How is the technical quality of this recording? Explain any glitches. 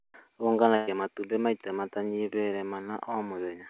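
The recording carries one glitch: a burst of packet loss early in the speech. It arrives over a narrowband call path with nothing above 4 kHz, which fits a G.711 A-law codec at 64 kbps.

From 0.76 to 0.89 s, a run of packets failed to arrive in time. The receiver covered about 110 ms by extending the last received sound and fading it, heard as a brief held buzz or hiss rather than silence. About 120 ms of speech is lost, and the audio resumes just before "matumbĩ maita matanyihĩire", with the missing stretch skipped.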